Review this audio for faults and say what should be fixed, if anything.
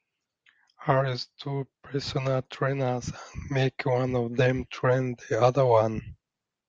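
Nothing stood out on listening, so there is nothing here that needs fixing.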